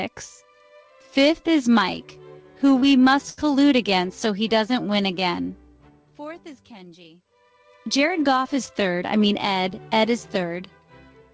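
At 2.80 s there is a short concealed packet loss. About 20 ms of audio never arrived in time. The receiver filled the hole by extending the preceding sound for about 17 ms, then blended back. It is heard as a brief smear or wobble.

From 3.30 to 3.39 s comes a burst of packet loss. About 80 ms went missing in a row. The receiver stretched the last sound for about 75 ms and faded it. A held buzz or fading hiss results, and the sound resumes further on.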